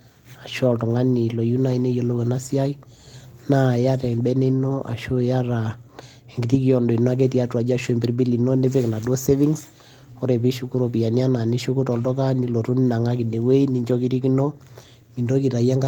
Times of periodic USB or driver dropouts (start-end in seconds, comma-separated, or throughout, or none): none